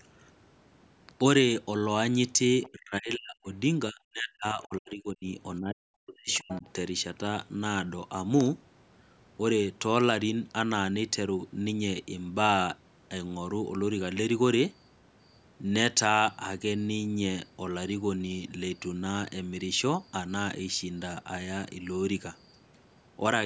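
Right at 2.62 s there's a quick scrap of the other side's voice leaking through, lasting only until about 2.69 s and sitting roughly 25 dB under the talker. It's most likely far-end audio from the loudspeaker that the echo canceller didn't fully scrub out of the mic. It shows up again, louder this time at maybe 15 dB down, from 6.33 to 6.62 s, overlapping the last dip.

Those dips are speech suppressed in double talk, and there are three close together: 2.72 to 3.48 s, 3.89 to 5.26 s and 5.6 to 6.65 s. In each, the talker's level drops in chunks, at its deepest by something like 40 dB, which is close to gone. That adds up to around 0.7 s, 1 s and 0.7 s of damaged speech. The likely cause is the canceller hearing both sides at once and ducking everything because it couldn't separate the near talker from the echo. The call's mic processing tops out at 8 kHz throughout.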